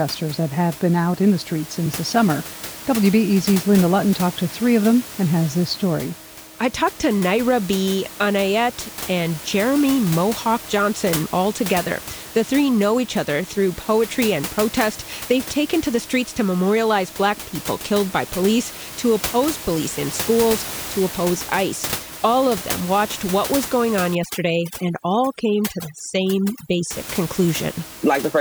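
Overdone noise removal from 24.15 to 26.91 s, right after "what was going on": frequency bands near the room-noise level, only about 13 dB below speech, are suppressed, leaving twinkling near-silence.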